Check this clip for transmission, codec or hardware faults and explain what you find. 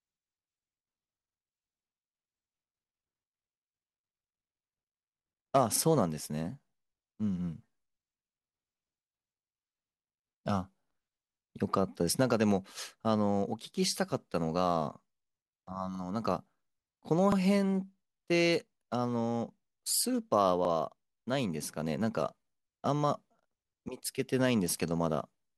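Three repeated buffer faults occur, at 5.76 s, 17.32 s and 20.65 s. Each time fresh audio arrived late, so the device played its last 43 ms block once more, which fits a 2048-sample buffer. Each sounds like a brief stutter with a hard join, and no audio is lost.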